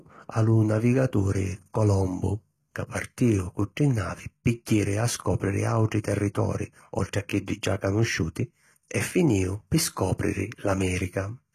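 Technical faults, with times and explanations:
Throughout, HE-AAC compression: s sounds turn gritty and lispy, with nothing above 14.9 kHz, likely from treble rebuilt from copied lower bands at about 20 kbps.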